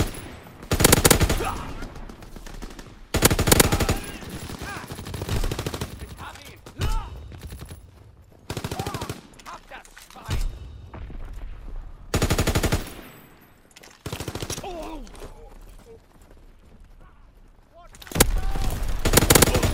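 At 7.59 to 7.63 s, 12.96 to 13.06 s, and briefly at 15.94 s, the audio breaks into DAB burbling. Weak reception lets bit errors, at a rate of a few tenths of a percent, slip through error correction and corrupt MP2 frames. Wrong scale factors make individual sub-bands jump in level, and wrong samples put short blips of noise into single sub-bands. On a spectrogram these appear as short, blocky bright patches in narrow bands. The waveform shows erratic bursts.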